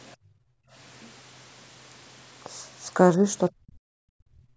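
From 0.03 to 0.16 s, a faint second voice sits under the recording. It is very quiet, far below the main speech. This is likely the other side's voice leaking through, where the echo canceller left some loudspeaker sound in the microphone.

From 0.17 to 0.73 s comes background gating by the echo canceller. The canceller clamped the microphone while the loudspeaker played. The room tone drops by about 29 dB for roughly half a second, then returns.

From 3.5 s to the end, the talker's speech is suppressed in double talk. The level falls sharply, by around 40 dB at the deepest, for about a second. The likely cause is both sides talking at once, so the canceller turned everything down.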